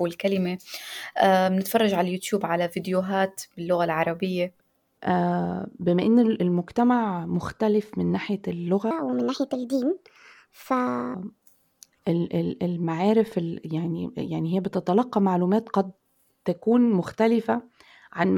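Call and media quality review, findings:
Section at the wrong speed, 8.91–11.14 s: speech runs 1.43x fast, pitch up about seven semitones. Likely clock mismatch in editing or playback resampling.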